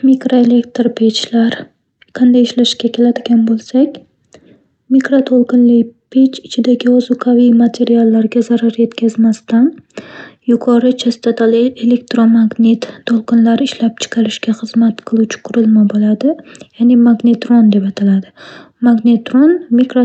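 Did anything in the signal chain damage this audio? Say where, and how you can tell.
No, nothing in the chain damaged this speech.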